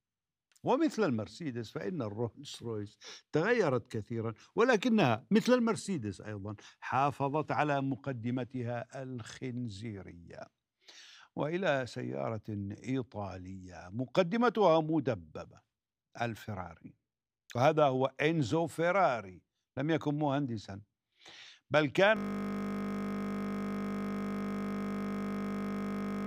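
At 22.17 s the sound collapses into a steady, mechanical buzz pitched at 50 Hz, and it holds unchanged until the clip ends. This is a system hang loop. The computer or its audio driver stopped supplying new audio, and the sound hardware kept replaying the same 20 ms stretch of its ring buffer, roughly two hundred times over. Because that slice is so short, the exact repeats fuse into a tone at the loop rate rather than a stutter.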